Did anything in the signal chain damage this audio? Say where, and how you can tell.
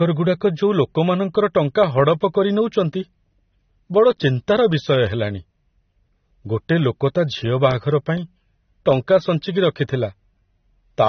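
Yes, at the codec stage, across the whole clip. Nothing remains above 6.3 kHz, and the speech is dull and smeared, with warbling fizz on sibilants. This is likely AAC compression, and it fits about 24 kbps. A simple low-pass filter would darken it without that swirling texture.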